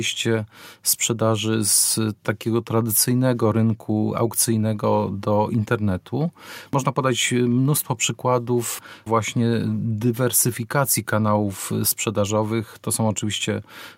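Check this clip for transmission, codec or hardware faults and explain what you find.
No faults turn up in this clip.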